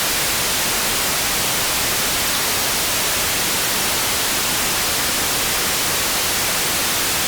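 A harsh chirp-like burst cuts through the sound from 2.23 to 2.38 s, and a shorter blip follows from 3.62 to 3.68 s, both peaking fairly loud at around -10 dBFS. Each is a corrupt frame decoded: flipped bits in the compressed data scrambled the gains and codes, yet the decoder played those frames anyway, putting energy at wrong frequencies. The first burst spans several consecutive damaged frames, the second only a few.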